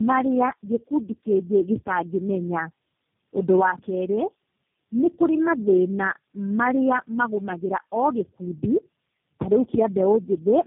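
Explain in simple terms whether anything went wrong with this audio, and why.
Something did go wrong: from start to finish the speech has tandem speech coding. It passed through four compressing speech codecs in a row, each squeezing the previous one's damage, so it sounds rougher and more warbly than one weak link would, with nothing above 3.1 kHz.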